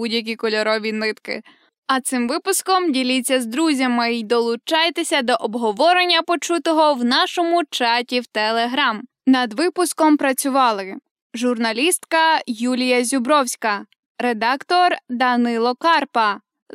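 No technical faults can be heard anywhere in the recording; the signal stays continuous and steady throughout.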